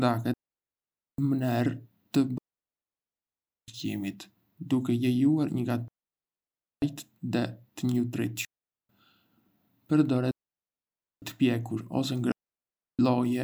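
Digital wireless dropouts at 0.34–1.18, 2.38–3.68, 5.88–6.82, 8.45–8.89, 10.31–11.22 and 12.32–12.99 s cut the speech into clean near-silent holes as the receiver mutes on lost data. They appear as abrupt blank gaps in waveform and spectrogram, with no noise burst at either edge.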